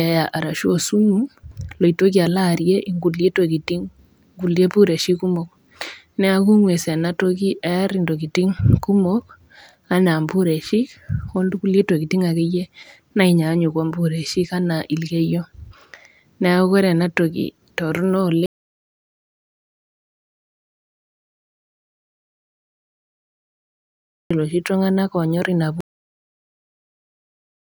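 At 25.81 s the final stretch of audio was never written out, a cut-off end: the last buffers were lost before playback. The speech stops abruptly mid-sound, with no natural decay, and drops straight into digital silence for the remaining 1.8 s.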